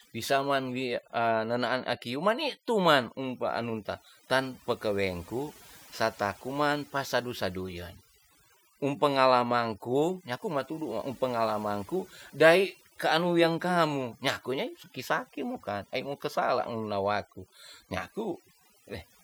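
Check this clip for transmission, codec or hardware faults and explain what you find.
The speech shows one fault, present from start to finish: overdone noise removal. A noise reduction stage was driven too hard, so any frequency band sitting close to its noise estimate gets pulled far down or switched off entirely. Between phrases the background collapses to near silence broken by twinkling, chirpy specks. The quieter parts of the voice fall below that threshold too and are stripped away.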